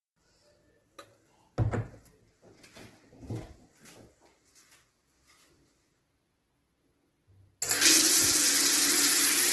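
Throughout the audio, tonal parts turn rough and grainy, with noisy fill in place of clean detail and nothing above 12 kHz. This is heavy Opus compression, likely in its CELT music mode, where starved bands are padded with folded or noise content, fitting a rate near 12 kbps.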